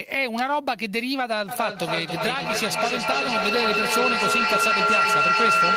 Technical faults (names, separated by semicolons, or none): feedback howl